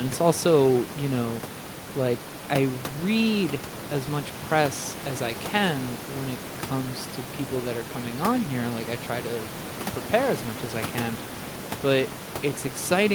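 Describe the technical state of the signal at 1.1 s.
At 1.1 s the signal is intact, with only the room's own background noise sitting about 13 dB below the speech.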